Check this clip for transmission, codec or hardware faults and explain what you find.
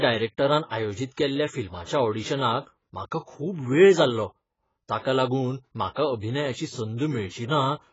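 One fault runs through the whole speech clip, and it is most likely AAC compression. Throughout, the sound is dull and smeared, with nothing above 7.6 kHz. The AAC-LC encoder splits each frame into frequency lines and coarsely quantises them against a hearing model. Starved of bits, it drops the top of the band and leaves gaps or substitute noise in the bands it keeps. The damage is heavy, which fits a bitrate near 16 kbps, and it gives sibilants and sustained sounds a warbling, fizzy texture.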